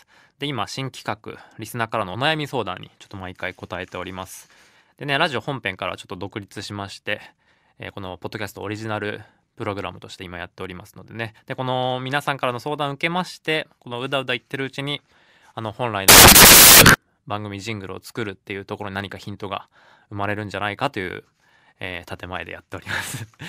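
Samples built from the wrong bytes, 16.09 to 16.94 s: the reader combines each sample's bytes wrongly, so the rapidly changing low-order bits become the dominant part of every value. The speech turns into loud, harsh broadband noise.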